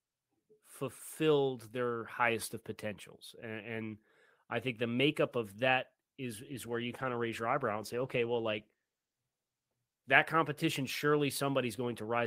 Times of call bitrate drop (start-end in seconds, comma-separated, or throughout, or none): 6.45-11.05